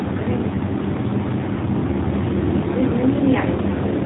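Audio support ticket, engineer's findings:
Buzzy, synthetic speech throughout. Nothing above 3.8 kHz. Room noise rising by about 12 dB near 2 s, still about 19 dB under speech, turns into a swirling warble. Probable component: AMR narrowband mobile codec, low mode, fits roughly 7.4 kbps. Too few bits per 20 ms frame.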